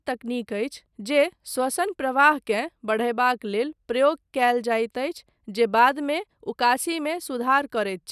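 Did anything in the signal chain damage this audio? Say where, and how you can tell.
No, nothing in the chain audibly damaged this speech.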